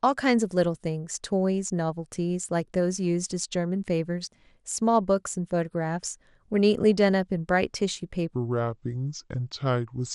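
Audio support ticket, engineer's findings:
MP2 compression, whole clip. Dull, band-limited speech with gurgling, granular grit. Upper sub-bands drop in and out; surviving bands coarsely quantised. Plainly audible. Likely cause: an MPEG Layer II encoder starved of bits, consistent with a low-rate stream around 80 kbps.

Section at the wrong speed, 8.34 s to 10.14 s. Speech turns slow and deep. Playback runs at 0.728x, pitch down about five semitones. Speed and pitch shift together. Likely cause: playback or edit referenced to the wrong clock for that segment.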